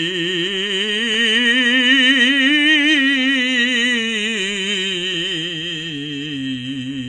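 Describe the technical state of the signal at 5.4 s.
At 5.4 s the music is still carrying the AAC compression damage present across the whole clip, likely from a low-bitrate AAC-LC encoder, and the loss points to a rate around 32 kbps. Starved of bits, the encoder cuts the band at 10 kHz and coarsely quantises what remains, so the music sounds plainly dull and smeared, with nothing above 10 kHz and a warbling, fizzy edge on sustained tones.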